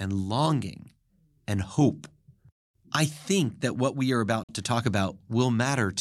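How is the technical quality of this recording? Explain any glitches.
The recording has one glitch, a short dropout in the speech. From 4.44 to 4.49 s there is a Bluetooth stall: the sound cuts to 51 ms of silence, likely because interference starved the headphone buffer. It shows as a flat gap in the waveform and a blank vertical strip on the spectrogram.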